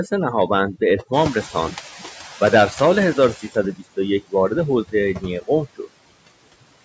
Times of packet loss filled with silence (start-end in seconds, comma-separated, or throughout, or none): none